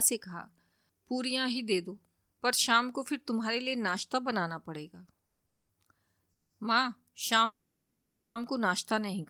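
At 5.20 to 5.24 s, a short stall from a late packet holds the current speech sound for about 30 ms before resuming where it stopped. It shows on a spectrogram as horizontally smeared harmonics and in the waveform as a briefly repeating cycle.

Call audio freezes follow at 5.26 to 5.40 s (130 ms), 5.46 to 5.70 s (230 ms), 6.32 to 6.51 s (180 ms) and 7.45 to 8.37 s (910 ms). They were likely caused by delayed packets draining the jitter buffer. Each stretches the last sound into a fading buzz or hiss, and the longest decays into roughly 90 ms of silence. These appear as flat, streaky bands and shrinking waveform envelopes.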